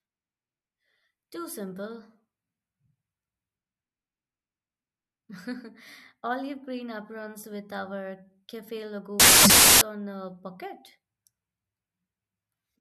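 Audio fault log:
9.20 to 9.81 s, samples built from the wrong bytes: for about 0.6 s the speech is swamped by loud, harsh noise. The bytes of each sample got assembled wrong, from a shifted offset, a swapped order, or a misread alignment, so the jittery low-order bits ended up as the big part of every value. That turns the signal into broadband noise, close to white on the louder sounds.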